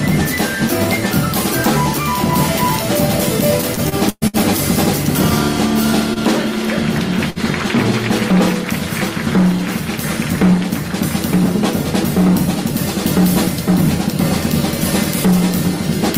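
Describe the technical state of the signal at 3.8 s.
Repeated packet loss (robotic sound), 3.61–4.36 s: five gaps, the longest 119 ms, are filled by extending the previous sound, leaving choppy, broken-up audio.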